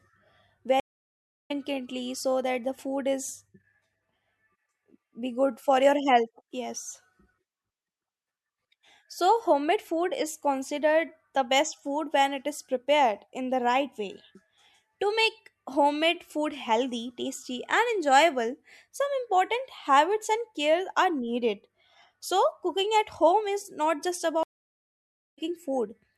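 At 0.80 s the connection drops and the player has to reconnect and start a new decoder partway through the stream. This stream reconnect leaves about 0.7 s of silence, and the speech resumes at 1.51 s roughly 0.4 s further on, so a short stretch is skipped. The same fault returns at 24.43 s, just after "is not just". The silence lasts about 0.94 s, and when the audio comes back at 25.39 s it has jumped ahead by roughly 0.3 s.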